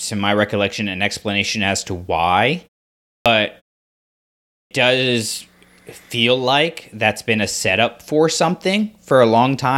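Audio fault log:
3.09 s and 4.53 s, clipped start after a pause: after a pause of about 0.5 s following "explanation as to why", and again after a 1.0 s gap before "does feel like that's", sound snaps in from silence with its opening missing, about 170 ms and 180 ms lost. The output device drops into a low-power state during the quiet and needs that time to wake and lock before it passes audio.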